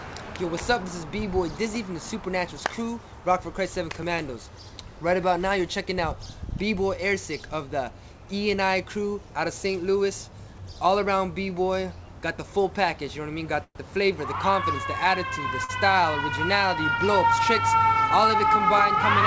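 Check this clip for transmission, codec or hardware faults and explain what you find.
Three transmission faults occur in the last third of the clip, all timing problems on a call path. The audio is band-limited at 8 kHz, which fits G.722 at 64 kbps.

From 13.64 to 13.77 s there is a call audio freeze. The last sound carries on as a fading buzz and then about 60 ms of silence, 111 ms in all. The cause is likely delayed packets draining the jitter buffer. The audio then resumes where it stopped, with nothing lost.

At 15.64 to 15.71 s there is a short stall from a late packet. One packet missed its slot and the buffer ran dry. The receiver held the last sound for 47 ms until the packet arrived. The result is a stretched sound with a slight buzz or dip. Nothing is missing.

From 17.79 to 18.56 s there is a jitter buffer speed-up. The buffer had built up extra delay. To trim it, the receiver cut many short pitch-period slices, about 50 ms in total. 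The audio runs about 6% fast at unchanged pitch and sounds slightly hurried.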